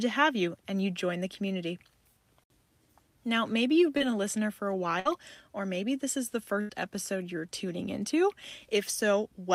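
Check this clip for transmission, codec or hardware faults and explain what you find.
There are transmission faults here: one short concealed packet loss and two bursts of packet loss, all in the middle of the clip.

From 3.97 to 4.12 s, just after "maybe you've" and before "listener for a", there's a short concealed packet loss. About 20 ms of audio never arrived in time, so the receiver invented roughly 24 ms to cover it by carrying the last sound forward, then eased back into real audio. That also stretches the timing slightly, by something like 15 ms. You hear it as a quick smear or wobble rather than a clean gap.

The bursts of packet loss sit at 5.00 to 5.07 s, between "listener for a" and "or maybe this is", and at 6.61 to 6.71 s, between "maybe this is the" and "episode you're tuning into". Here several packets in a row went missing, about 60 ms in the first case and 80 ms in the second. 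The receiver covered them with 55 ms and 80 ms of extended, fading audio. Each sounds like a brief held buzz or dying hiss, then the speech jumps ahead with that stretch gone.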